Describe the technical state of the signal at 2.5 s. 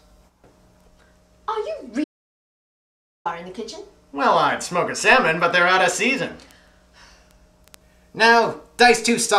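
At 2.5 s the input feed has likely been lost, through a dropped connection or mute, while recording carried on writing silence: an audio dropout to silence from 2.04 to 3.25 s. The sound cuts off abruptly into total silence, with no room tone, and about 1.21 s of material is missing.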